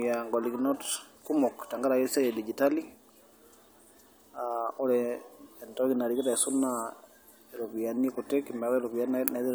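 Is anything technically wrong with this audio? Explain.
No, there are no faults.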